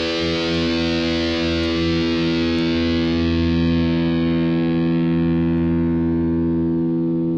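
Nothing in this recording of everyday sounds gives a listener any technical fault to point to.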